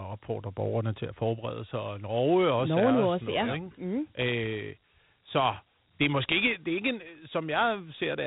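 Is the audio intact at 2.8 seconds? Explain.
No. At 2.8 seconds, as throughout, the speech has been through Dialogic VOX ADPCM, coding each sample as a coarse 4-bit step, a rate that fits 32 kbps. Nothing remains above 3.9 kHz, and a plainly audible gritty hiss trails the speech.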